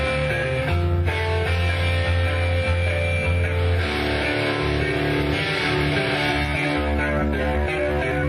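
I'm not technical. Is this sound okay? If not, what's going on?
No. Near the end, software likely squeezed part of the audio to make it fit a shorter length, a fault called a time-stretched section. To keep the pitch from rising, it drops short pieces instead of just playing faster. From 6.49 s to the end at 8.28 s, the sound runs about 1.73 times faster than before, so the pace suddenly turns rushed while the pitch stays where it was.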